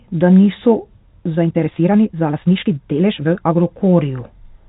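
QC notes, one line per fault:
1.34–3.58 s, time-stretched section: the pace abruptly jumps to 1.91 times normal and turns rushed, yet pitch holds steady. A faster playback rate would raise pitch, so this is likely software squeezing the audio by dropping short pieces.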